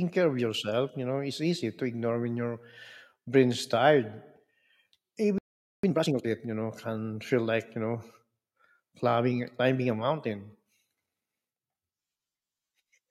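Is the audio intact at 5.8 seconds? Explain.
No. A playback stall runs from 5.38 to 5.84 s, so at 5.8 s the output is silent. The speech cuts off in mid-flow and nothing is heard for about 0.45 s. This is likely the player running out of buffered data or having its output thread blocked, so it had nothing to send to the output until it recovered.

Immediately after, from 5.84 to 6.27 s, time-compressed catch-up follows. To recover the delay, the player removes small slices of the backlog and cross-fades the remaining pieces together. The speech therefore runs at twice normal speed while keeping its normal pitch. Normal pacing resumes at "you know can feel".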